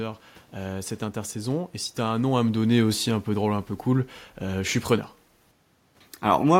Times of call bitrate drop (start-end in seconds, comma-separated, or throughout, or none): none